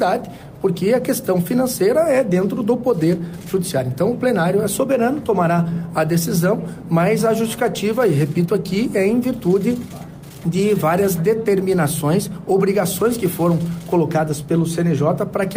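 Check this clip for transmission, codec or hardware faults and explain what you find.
No faults of any kind.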